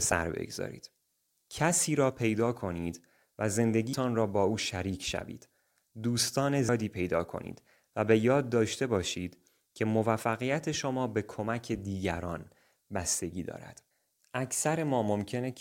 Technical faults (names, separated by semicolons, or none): damaged data in a compressed stream